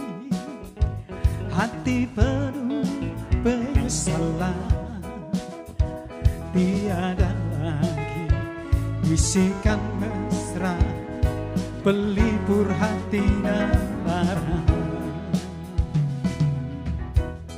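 No faults detected in this recording; nothing to log.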